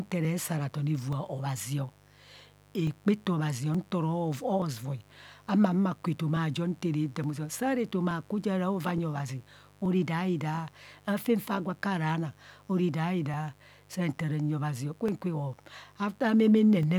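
A mains buzz runs under the speech from start to finish. It sits about 30 dB below the voice. Its root is 50 Hz, but it sounds raspy rather than smooth. That rasp comes from sharp switching spikes, two in every mains cycle. A dimmer, a rectifier or a missing shield lets them into the signal. The spikes spread harmonics of 50 Hz up to several kHz. The result is a steady, gritty drone beneath everything.

From 0.25 s to 16.83 s, a click recurs at a steady interval. It comes every 0.87 s, about twenty times in all. The spacing never wavers. This is likely clock drift buffer slips. Two devices seem to run on separate clocks, differing by roughly 700 ppm. The buffer between them slowly fills or empties. Then a block of a few tens of samples is dropped or repeated, and each slip is heard as a click.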